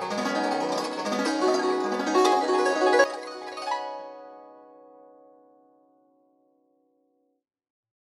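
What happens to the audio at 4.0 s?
At 4.0 s the music sits inside a sudden gain jump that began at 3.04 s and lasts to the end: music and noise floor drop together by about 12 dB, likely from a gain setting applied without a ramp. The waveform shows a sharp step-down in amplitude, and the spectrogram dims uniformly across all frequencies.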